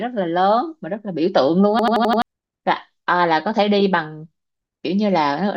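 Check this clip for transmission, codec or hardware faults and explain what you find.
One hardware-side fault is present: a system hang loop from 1.79 s to 2.22 s in this speech clip. The host or driver stalled while the audio device kept replaying its ring buffer, so an 85 ms slice repeats exactly, about five times, at 11.7 Hz, which fits a 4096-sample buffer. The result is a rapid machine-gun stutter, and about 0.4 s of the real speech is missing where the loop stands in for it.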